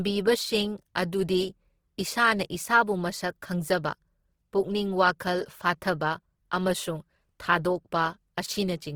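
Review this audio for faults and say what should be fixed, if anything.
Throughout, the speech sounds grainy and rough rather than swirly like MP3, because empty bands are noise-filled. This is likely Opus compression at a bitrate near 16 kbps. Re-encode from the source at a higher bitrate.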